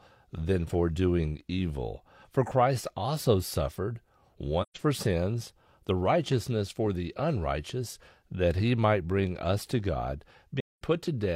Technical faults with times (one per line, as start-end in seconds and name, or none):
4.61-4.78 AAC frame loss with muting
10.60-10.82 AAC frame loss with muting